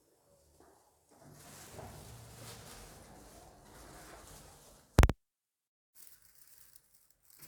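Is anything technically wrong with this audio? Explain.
No, nothing in this audio points to a technical fault.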